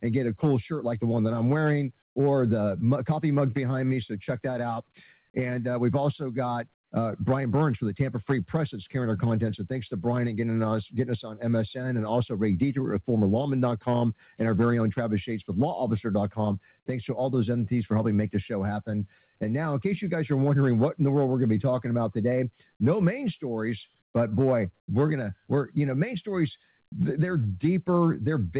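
At 2.02 s, 6.74 s and 24.02 s the real background vanishes for 120 to 180 ms, replaced by a flat, detail-free hiss about 14 to 16 dB quieter. That's comfort noise in place of the background, likely from discontinuous transmission: the sender stopped transmitting and the receiver filled the gap with synthetic noise. Nothing reaches above 4 kHz, which fits a narrowband call codec like G.711.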